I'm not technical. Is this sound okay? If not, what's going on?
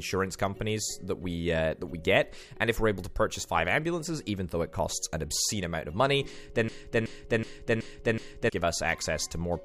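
No. From 6.68 to 8.49 s, a short scrap of sound about 0.37 s long plays five times in a row, like a skipping CD. This is a broken-record loop: the player or stream likely stalled and kept repeating its last piece, so the audio meant for that stretch is lost.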